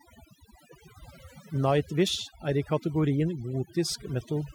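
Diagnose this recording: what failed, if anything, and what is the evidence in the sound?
The stage that went wrong is the processing, where someone applied overdone noise removal to a noisy speech recording. It's there the whole way through: between phrases the background drops to near silence with little twinkling specks. The suppressor's threshold was set too high, so any frequency band sitting close to its noise estimate got pulled way down or gated off, and the quieter parts of the speech went along with the noise.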